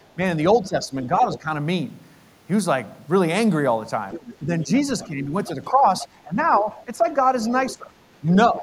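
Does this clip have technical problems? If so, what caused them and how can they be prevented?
Yes. Speech suppressed in double talk occurs at 0.15 to 1.48 s, 4.4 to 7.06 s and from 7.75 s to the end. The voice dips by about 10 dB, and by about 15 dB in the last stretch, for roughly a second at most each time. The likely cause is an echo canceller that, facing both sides talking at once, turned down the near talker along with the echo. A double-talk-aware canceller with gentler suppression prevents this.

The other side's voice leaking through is heard at 1.32 to 1.38 s, 4.1 to 4.35 s, 5.0 to 6.59 s and 7.45 to 8.17 s, about 15 to 20 dB below the main speech. It is likely loudspeaker output that the echo canceller failed to remove from the microphone. A headset or lower loudspeaker volume prevents it.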